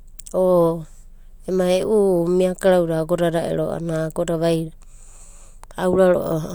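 No technical faults can be heard anywhere in this speech.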